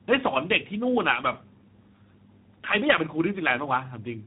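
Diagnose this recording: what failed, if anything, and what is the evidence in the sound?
At the codec stage, the speech passed through two speech coders in tandem: a low-rate coder like G.729A, then G.711 transport, then G.726 at 32 kbit/s. Each coder re-quantised the last one's errors, so throughout the speech is rough, muffled and warbly, with nothing above 3.8 kHz.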